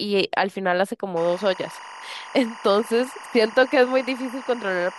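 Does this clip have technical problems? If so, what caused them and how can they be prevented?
Yes. Timecode bleed from 1.17 s to the end: 24 fps linear timecode, a square wave flipping near 1 and 2 kHz, chirps around 20 dB below the speech. Prevent it by running timecode on shielded cable, kept physically separate from audio lines and off tracks adjacent to audio.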